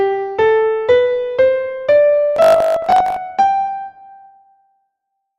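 Audio was likely arriving too seldom from 2.36 to 3.16 s, so the playback repeated a short buffer of about 20 ms to fill the gaps, skipping most of the real signal. That produces robotic sound from repeated short buffers: a rigid, metallic 50 Hz buzz that only loosely follows the underlying audio.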